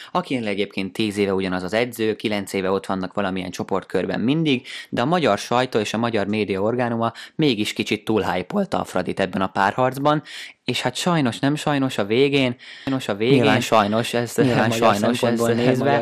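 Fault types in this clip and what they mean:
MP2 compression: Throughout the speech there is a dull, band-limited quality with a gurgling, grainy edge, likely from MPEG Layer II coding at a low rate, and the damage is plainly audible, consistent with roughly 80 kbps. Upper sub-bands drop out and flicker back while the remaining bands are coarsely quantised. This granular texture sets it apart from MP3 or AAC, whose artefacts are more swirly pre-echo and warbling.
Doubled audio track: From 12.87 s to the end, a second full-band copy of the speech runs about a second behind the original at roughly the same level. It is likely a second capture through a slower path, or an edit that left two copies out of step. Unlike an acoustic echo or reverb, the copy has no decay or room colouring, does not repeat further, and begins abruptly.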